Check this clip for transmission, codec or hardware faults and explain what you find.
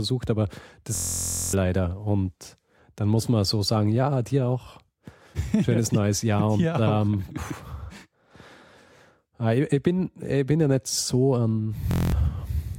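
Two system hang loop faults are audible. The first runs from 0.95 to 1.53 s. The second runs from 11.91 to 12.12 s, just after "ja nicht so ein". In each, the system stalled while the audio hardware kept replaying its ring buffer. A 23.22 ms slice repeats, which fits a 1024-sample buffer. It cycles 25 times, then 9 times. At 43.1 Hz the repetition fuses into a steady buzz. Roughly half a second of speech is lost, then about a fifth of a second.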